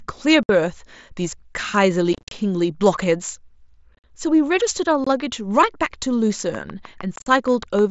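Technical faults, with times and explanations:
0.43–0.49 s, 2.13–2.32 s, 3.95–4.04 s, 5.04–5.07 s, 7.16–7.27 s: unconcealed Bluetooth headset packet loss. The speech drops to silence in holes of 60 ms, 143 ms spread across 180 ms, 75 ms across 90 ms, 23 ms, and 75 ms across 105 ms, with the longest single runs near 45–53 ms. The steps fit 7.5 ms mSBC frames. Nothing fills the gaps, so the edges are abrupt and the scattered ones sound chopped. On a spectrogram they appear as blank vertical strips cut through every band, and on the waveform as flat stretches between abrupt edges.
6.55–7.80 s: train of clicks. About ten sharp, alike pulses come at a regular 6.4 per second, peaking roughly 5 dB above the speech and ticking through the pauses. The last dropout at 7.16–7.27 s falls within this run. The likely cause is interference from nearby equipment or a faulty connection or power supply. On a spectrogram the clicks appear as evenly spaced thin vertical lines reaching high up the band, and on the waveform as isolated spikes standing above the signal.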